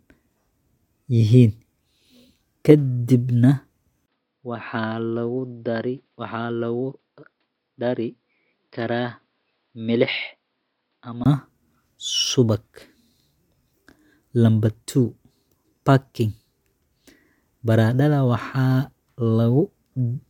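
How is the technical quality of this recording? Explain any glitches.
One glitch degrades the recording. From 4.06 to 11.26 s, the input likely switched to a poorer, narrower-band device: after a 20 ms gap, speech turns dull and quieter, with nothing above 5.2 kHz.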